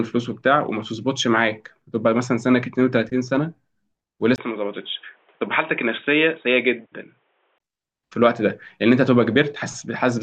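At 4.36 s a 20 ms gap, then speech goes dull and boxy, nothing above 3.8 kHz, with faint new hiss, until 7.60 s: likely an input switched to a poorer device.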